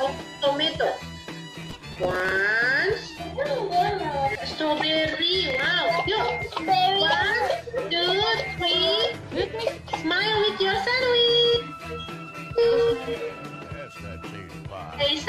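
Twice the processor falls behind its deadlines for buffers of roughly 5 ms each, so stale audio is replayed with hard edges. The result is processor overload crackle, a gritty tearing from 1.55 to 2.32 s and a brief burst from 5.50 to 5.65 s.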